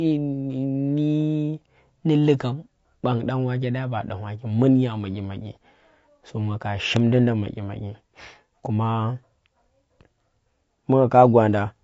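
Throughout the speech there is plainly audible coding damage, most likely from low-delay AAC compression (AAC-ELD) at a low bitrate, around 32 kbps. Its short frames resolve pitch harmonics poorly, so the speech sounds rough and grainy, with noise filling between harmonics and a thin, synthetic top band.

At 6.96 to 6.99 s, just after "so nga ka", a single loud pop stands roughly 15 dB above the speech. A sudden voltage pulse, likely from static, a switch or a driver glitch, was added to the signal, and the speech continues underneath it.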